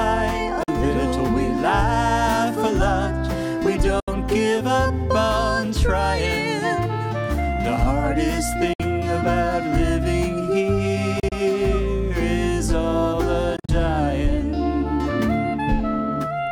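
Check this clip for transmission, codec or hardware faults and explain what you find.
Five short silences break up the audio, likely a Bluetooth dropout each time.

At 0.63 to 0.68 s, about 44 ms of sound vanishes. Late packets were discarded, so the output cut to silence.

At 4.00 to 4.08 s, a gap of about 73 ms opens the same way.

At 8.73 to 8.80 s, about 58 ms drops out.

From 11.20 to 11.32 s, about 58 ms is lost in scattered holes across roughly 116 ms, none longer than 29 ms, so it sounds stuttered rather than like one gap.

From 13.56 to 13.69 s, about 87 ms is lost in broken holes over the same span, the longest 43.5 ms.

The gap lengths fall in multiples of about 14.5 ms, which fits whole packets going missing. In every case the sound picks up further along, as if it had kept playing through the silence. That is what sets a dropout apart from a buffer underrun or stall, where playback resumes from the point where it stopped.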